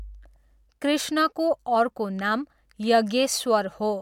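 No audible faults turn up anywhere in the speech recording.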